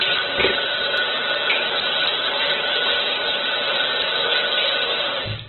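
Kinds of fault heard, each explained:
Opus compression: Throughout, these everyday sounds are dull and boxy, with nothing above 4.2 kHz, and their tonal parts come out grainy, rough and noisy. The likely cause is Opus in its music (CELT) mode at a very low bitrate, on the order of 8 kbps, squeezed to narrowband. With so few bits the encoder keeps each band's rough energy but fills in the detail by folding lower bands or adding noise, which gives the gritty texture.
block of digital silence: At about 0.97 s there is one brief tick, a dropout about 1.45 ms long, too short to hear as a gap. The signal drops straight to silence and then returns with no fade, so each edge is a hard discontinuity. A hole that size suggests a single 64-sample buffer that was not filled in time and went out empty.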